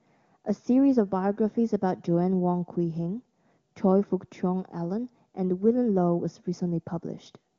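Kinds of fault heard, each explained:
No fault can be heard: the speech carries the band-limited but intact character of AMR wideband (HD Voice) coding, consistent with one of its higher rates, with no dropouts, clipping, noise bursts or timing disturbances anywhere in the signal.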